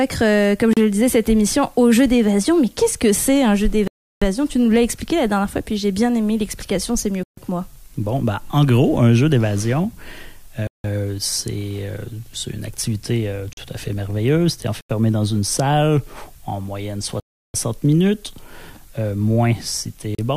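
Eight blocks of digital silence drop into this audio: at 0.73 s (35 ms), 3.88 s (341 ms), 7.23 s (140 ms), 10.67 s (171 ms), 13.53 s (42 ms), 14.81 s (85 ms), 17.20 s (341 ms) and 20.15 s (36 ms). Each time the signal just drops to silence with no fade. The short ones sound like brief gaps, and the longer ones are proper holes. Several lengths fit power-of-two buffers, which points to output buffers missing their deadline.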